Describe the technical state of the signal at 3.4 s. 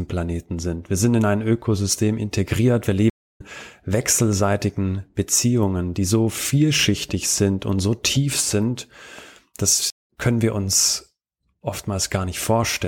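At 3.4 s the speech is just coming back from a stream reconnect spanning 3.10 to 3.41 s. The connection dropped, leaving about 274 ms of silence, and a fresh decoder restarted mid-stream, so speech resumes roughly 0.3 s further on, with the first frame faded in.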